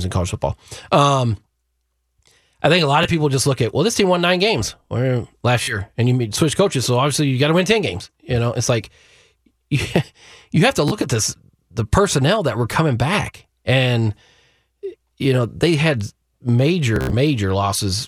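Bluetooth stutter hits this speech four times. At 3.04 s, after "I think a lot", a brief slice repeats before "people just look at". At 5.63 s, just before "and you switch coaches", about 46 ms drops out. At 10.88 s, after "you have to", about 31 ms goes. The worst is 16.96 to 17.13 s, a buzzing machine-gun run. Each time, packets came late or not at all. The receiver replayed its last slice, then jumped ahead.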